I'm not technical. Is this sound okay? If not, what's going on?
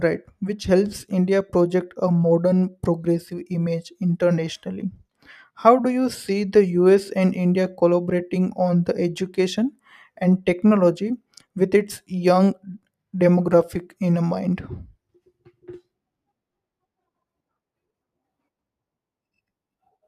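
Yes, nothing in the signal points to a technical problem at any point in the recording.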